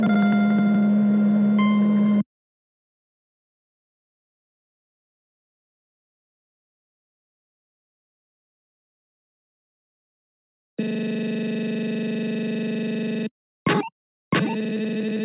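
No technical fault can be heard anywhere in the audio. Nothing in it breaks, jumps or drops out at any point.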